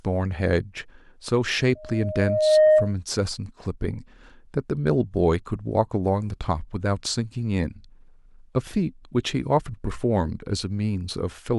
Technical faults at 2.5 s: loudspeaker feedback squeal

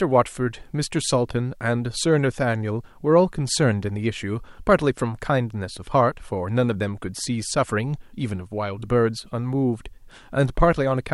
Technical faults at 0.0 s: none

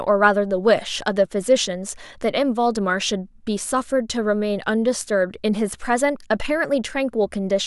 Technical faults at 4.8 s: none

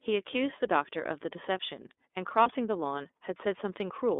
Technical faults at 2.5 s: iLBC codec; lost iLBC frames

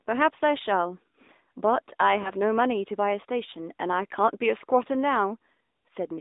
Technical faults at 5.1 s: AMR narrowband mobile codec

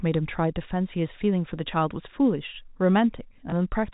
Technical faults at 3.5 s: packet loss with last packet repeated

